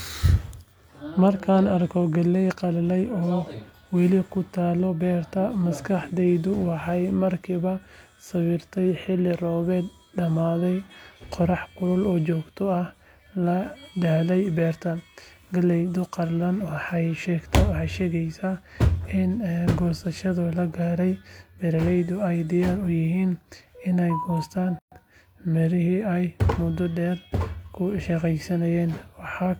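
At 24.79 s the speech drops out for about 128 ms, a gap at a join of encoded pieces: two separately encoded segments were butted together with their start delay and end padding left in. On a waveform it is a flat stretch with smeared edges; a spectrogram shows a clean vertical blank before the sound resumes at 24.92 s.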